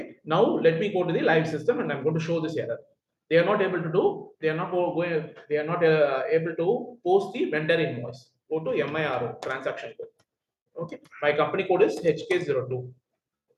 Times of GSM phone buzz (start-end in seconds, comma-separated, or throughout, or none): none